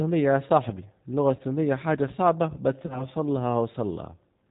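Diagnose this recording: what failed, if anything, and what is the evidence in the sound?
Codec stage: the G.729 codec keeps everything below 4 kHz and gives the speech a rough, synthetic texture throughout, which fits an 8 kbit/s stream. It sounds rebuilt rather than merely low-pass filtered.

Network stage: VoIP packet loss concealed by the speech codec, heard at 1.36 to 1.42 s after "يا صاحبي اللغة" and at 2.86 to 3.05 s after "حاجة صعبة بس". Each time the sound is stretched and fades, which fits one lost 30 ms packet. Unlike a plain dropout, there is no silent gap.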